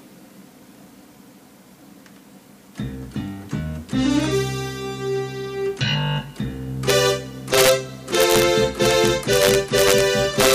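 A gain stage exceeded its integer range without limiting, so peaks wrapped to the opposite sign: integer overflow gives violent cracks at 6.90 s, 7.54–7.71 s, 8.15–8.43 s, 8.85–10.01 s and 10.40–10.55 s, driven about 1 to 4 dB over.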